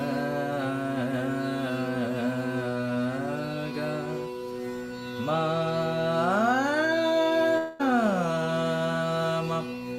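At 7.57 s the incoming audio likely stopped arriving in a long network dropout lasting until 7.81 s. The receiver bridged the whole 0.22 s gap by continuing the last sound as a fading buzz or hiss, with no silence, before playback resumed without the lost portion.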